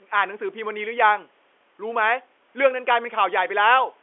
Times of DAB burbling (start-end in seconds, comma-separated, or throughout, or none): none